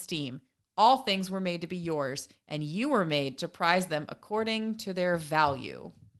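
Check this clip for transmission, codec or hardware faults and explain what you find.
Nothing here points to a transmission, codec or hardware problem; the speech just carries the mild coding texture and slightly trimmed top end you'd expect from an ordinary call codec working as it should.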